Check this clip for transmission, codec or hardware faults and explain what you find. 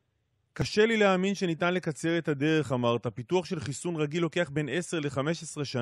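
One fault turns up in this speech clip. At 0.62 s a tiny skip appears, caused by an overlap between stream segments: the player trimmed about 18 ms of genuine, undoubled sound, so the waveform jumps.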